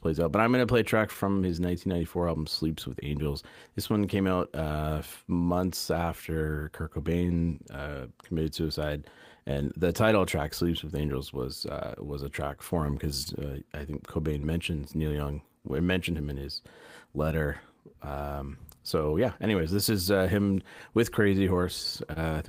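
Clock drift between sender and receiver runs through the whole clip. The sender's clock runs about 2% slow, so the receiver's buffer keeps draining.

Repeated timing corrections run from 0.22 to 21.4 s. The receiver stretches the audio to 98% speed, adding roughly 0.4 s in small repeats.

Scattered short gaps appear from 1.13 to 8.33 s. About five brief holes, none longer than roughly 15 ms, are patched by continuing the sound.

More scattered short gaps follow from 11.7 to 22.18 s. About seven holes, the longest around 30 ms, are filled the same way.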